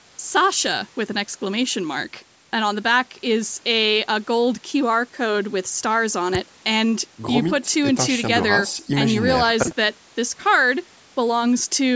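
Nothing stood out on listening; the speech carries the usual band-limited sound of a call microphone path, with nothing above 8 kHz, which is normal here.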